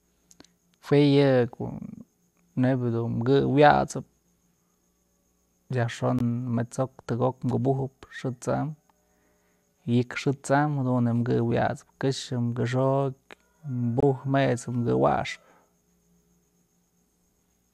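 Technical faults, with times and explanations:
6.19 and 14.00 to 14.03 s, gap at a join of encoded pieces: the speech drops out for about 18 ms, then 26 ms, and picks up right where it left off. Separately encoded pieces were butted together untrimmed, so encoder start delay and last-frame padding survive as short silences with smeared edges.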